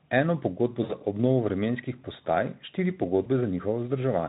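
Around 0.83 to 0.93 s, before "za obnovo vremenskih postaj", and again at 3.23 to 3.29 s after "obnovo vremenskih postaj štiri", there's VoIP packet loss concealed by the speech codec. The Speex decoder stretches the last sound into a buzzy tone or coloured noise that fades.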